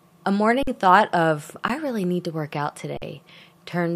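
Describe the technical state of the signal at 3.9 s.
At 3.9 s the signal is intact, with no audible fault at that moment.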